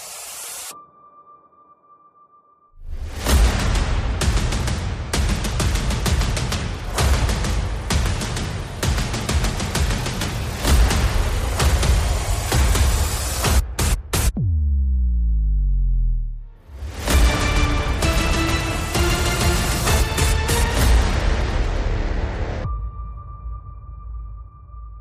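Nothing in the audio stood out as a technical problem on listening.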